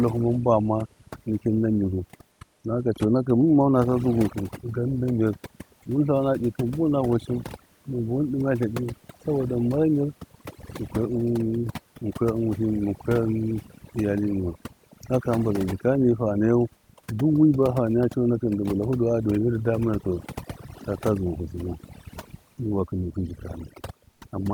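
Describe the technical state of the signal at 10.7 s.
At 10.7 s the speech is affected by overdone noise removal, which runs through the whole clip. The suppression is set too aggressively, muting frequency bands near the noise floor along with quiet speech detail. The speech sits over a near-silent, twinkling background, and a spectrogram shows isolated bright specks in the gaps and ragged, hollowed-out harmonics.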